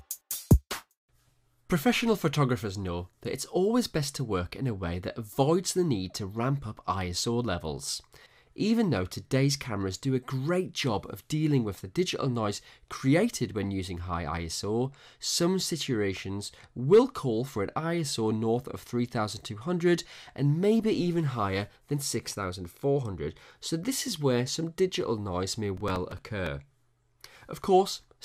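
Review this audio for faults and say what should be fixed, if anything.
Processor overload crackle runs from 25.77 to 26.47 s. The processor missed around fifteen short buffer deadlines over this short stretch. Each gap was filled with stale audio, making gritty tearing. The buffer size sounds like a few milliseconds. Fix it with a larger buffer or lower processing load.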